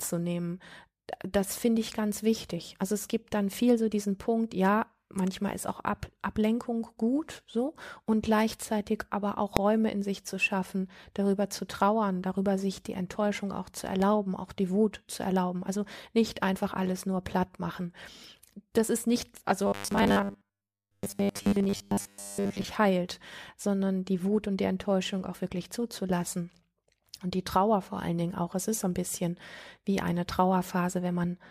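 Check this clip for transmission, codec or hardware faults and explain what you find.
Two faults turn up in this speech clip.

At 9.57 s, just after "und gleichzeitig aber auch", a calculation yields invalid numbers at full scale, pinning a block of about 0.67 ms (which fits a 32-sample block) to one extreme value. Because the block is so short, it comes across as a single sharp bang.

From 19.67 to 22.64 s, ending just before "heilt sondern die", the likely cause is robotic sound from repeated short buffers. New audio arrives too seldom, so a 10 ms chunk is looped in place of most of the real signal. That loop imposes a rigid 100 Hz metallic buzz that still loosely follows the speech.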